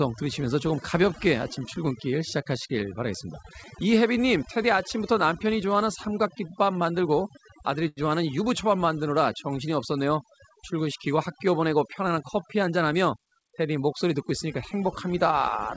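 Speech runs through a call path that points to a wideband G.722-style codec, with nothing above about 8 kHz, and the whole clip suffers from overdone noise removal: the background drops and breaks up into little twinkling specks, because the suppressor is clamping individual frequency bands whenever they look like noise, taking the quieter parts of the voice down along with them. Around 7.88 to 8.00 s there's a short stall from a late packet. The jitter buffer ran dry, so the receiver held the last bit of sound for about 88 ms until the packet showed up, then carried on from the same spot. Nothing actually goes missing, but you hear that moment stretched, with a faint buzzy hold, and everything after it sits about 88 ms later. Then from about 12.16 to 13.44 s there's a jitter buffer speed-up, where the receiver trims its backlog by snipping out tiny pitch-period-sized slices over and over. 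That works out to about a tenth of a second removed, so the speech runs roughly 6% fast at the same pitch and sounds a touch hurried through that stretch.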